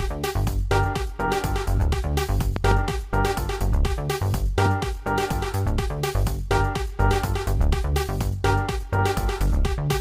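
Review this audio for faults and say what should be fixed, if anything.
A loud pop occurs between 2.56 and 2.74 s: two sharp pulses in quick succession, peaking roughly 15 dB above the surrounding level, with the audio continuing underneath. The likely cause is a voltage step or spike, from a connector being plugged or switched, a static discharge, or a driver glitch, entering the signal chain, where downstream circuitry shapes each pulse. To prevent it, make all connections and switching with the chain muted or powered down, and keep grounding and drivers stable during capture.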